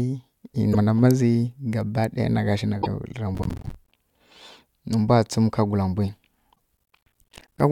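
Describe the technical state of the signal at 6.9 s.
At 6.9 s the speech is inside a burst of processor overload crackle. It runs from 6.77 s to 7.60 s. The processor cannot finish its short audio buffers on time, which points to buffers of around 10 ms. Dozens of deadlines are missed again and again, perhaps forty. Each miss drops in a tiny patch of silence with hard edges. Together these gaps make a gritty, tearing crackle over the speech until the load eases.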